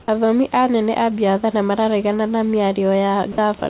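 At 0.02 to 0.08 s and again at 3.32 to 3.38 s, the speech briefly gives way to steady comfort noise for about 60 ms. This is likely sound dropped by the voice detector, which judged the sound to be background and stopped sending.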